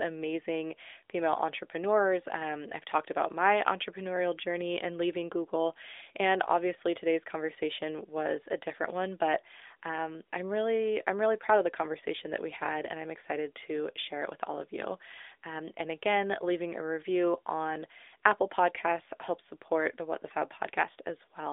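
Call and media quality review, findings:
Nothing to flag on this call; the narrowband AMR mobile codec keeps everything below about 3.7 kHz, which is simply how this line is carried.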